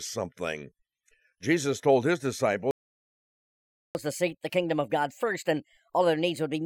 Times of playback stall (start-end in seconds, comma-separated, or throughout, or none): 2.71-3.95